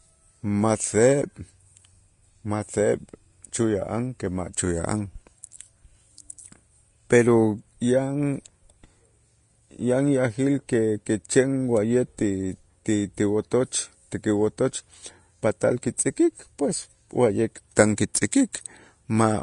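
From start to finish the speech carries plainly audible damage that is likely Vorbis compression, at a setting that fits a low bitrate of around 33 kbps. Nothing survives above 10.6 kHz, so the top is dulled, while the treble below that has been coded so coarsely that sibilants turn hissy and grainy and consonant onsets blur. A spectrogram shows a flat ceiling at 10.6 kHz and speckled, noise-like patches where fine high-frequency detail should be.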